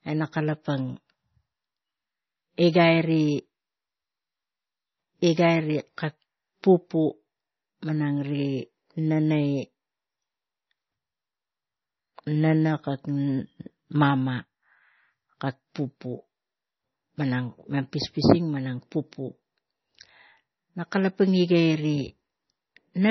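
Throughout, the speech carries heavy MP3 compression, likely from a low bitrate near 24 kbps: nothing above 5.9 kHz survives, leaving a flat spectrogram ceiling, watery swirl and smeared consonants.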